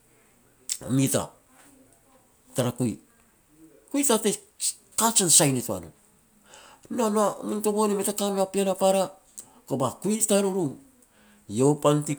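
No technical faults can be heard anywhere in the speech.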